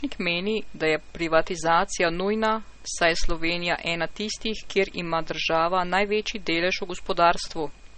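Throughout the speech, nothing sounds above about 8.4 kHz. This is likely low-bitrate audio saved at a high bitrate: 32 kbit/s MP3 damage survives re-encoding.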